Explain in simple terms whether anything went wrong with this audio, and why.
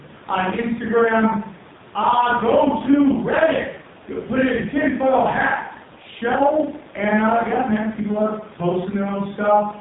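Throughout, the speech sounds buzzy, muffled and robotic, with nothing above 3.8 kHz. This comes from heavy AMR narrowband mobile codec compression, which rebuilds the voice from a crude phone-call model.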